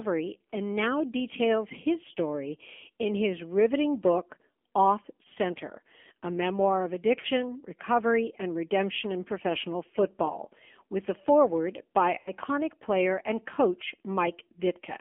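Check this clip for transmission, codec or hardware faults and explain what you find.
Two faults are present: the whole recording has passed through a narrowband AMR mobile codec, and speech frames drop out twice, at about 7.2 s and 12.2 s.

AMR narrowband mobile codec (throughout): The speech is confined to roughly 250 Hz to 3.4 kHz and has a plainly audible buzzy, synthetic edge. That sound fits a low AMR-NB mode around 7.4 kbps. At that rate the encoder sends only a coarse vocal-tract model plus a few excitation pulses, so fine spectral detail is lost. On a spectrogram, nothing appears above 3.4 kHz, and the harmonics look smeared and blocky.

Lost AMR speech frames (7.20 to 7.26 s, and 12.18 to 12.31 s): When frames fail their checksum, the decoder conceals the gap by repeating its last good pitch and filter settings at falling gain. The first loss covers about 40 ms, which points to two frames, and is heard as a short dip or warble. 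The second covers about 80 ms and sounds stretched, fading toward silence before the speech returns thin and rough. On a waveform, the envelope sags at both points. On a spectrogram, the harmonics freeze flat and then fade.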